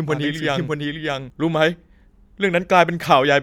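Speech, and for the first stretch it's got a doubled audio track: from the very start up to about 1.3 s, a second full-band copy runs roughly 0.7 s behind the original at about the same level. It's already under way when the clip opens and drops out abruptly at 1.3 s, with no decay or room colour, so it's not an echo. Most likely it's being captured twice, once through a slower path, or an edit left two copies out of step.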